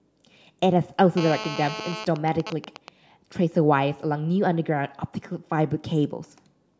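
From 1.17 to 2.05 s, a GSM phone buzz sits under the speech. A nearby 2G phone in a call transmits in bursts 217 times a second. The audio circuit rectifies them. The result is a hard, raspy 217 Hz buzz, rich in harmonics, about 10 dB below the speech.

From 2.16 to 2.89 s, GSM signalling bursts follow. A nearby phone is in a call, but its user has gone silent, so it sends only short groups of bursts. Rectified, they give even ticks with a longer 217 Hz buzz twice a second, at a similar level.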